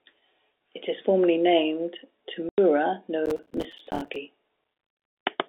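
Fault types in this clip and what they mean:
Packet loss filled with silence: Right after "is formally named", the speech drops out from 2.49 to 2.58 s. That is a 90 ms hole, which fits three lost packets of 30 ms each. The receiver played nothing in their place, so the gap starts and ends with hard edges.
Processor overload crackle: From 3.26 to 4.16 s a gritty crackle rides over the speech. The processing fell behind and missed many deadlines in a row. Each missed buffer left a tiny silent gap, which fits buffers of about 5 ms. It stops once the load clears.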